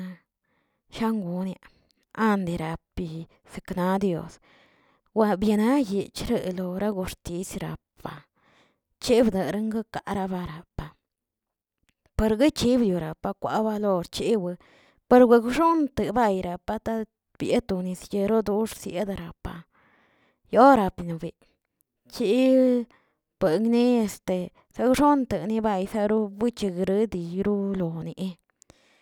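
Listening closely to the speech from beginning to end, nothing stood out as a technical fault.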